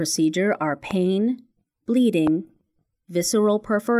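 A voltage spike, likely from a switch, plug contact or static discharge, enters the signal path twice, producing a loud pop at 0.91–0.93 s, roughly 10 dB above the speech, and another at 2.27–2.29 s, roughly 15 dB above. Each is a single sharp click, with the speech continuing underneath.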